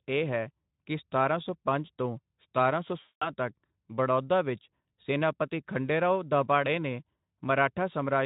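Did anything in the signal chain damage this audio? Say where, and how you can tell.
Yes. At the network stage, VoIP packet loss concealed by the speech codec hits from 3.01 to 3.3 s. About 200 ms was lost, which fits ten 20 ms frames. The Speex decoder extrapolates from the last pitch and filter, stretching the sound into a fading buzzy tone or coloured noise, and a spectrogram shows smeared, decaying energy there.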